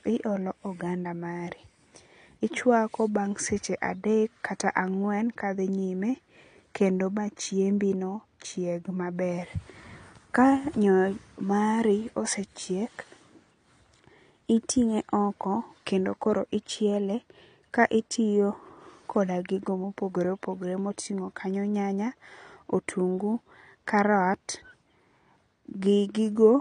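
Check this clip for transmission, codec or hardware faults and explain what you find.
There's one fault, running the whole way through: AAC compression damage on the speech. Nothing comes through above 9.6 kHz, and sibilants and held vowels have a smeared, warbly fizz, likely from an AAC-LC encoder starved of bits, around 32 kbps, quantising coarsely and dropping the top band.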